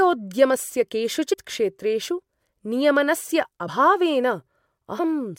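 Compressed frames are skipped three times: at 1.32 to 1.34 s, at 3.67 s and at 4.98 s. Each time the decoder never plays some of the coded frames, so the speech jumps forward by roughly 70 ms, then about 50 ms, then about 50 ms, which fits whole frames of 26.1 ms. Overlapping neighbour frames blend across the gap, so each join is a short smeared blip, not the sharp click of a sample-level dropout.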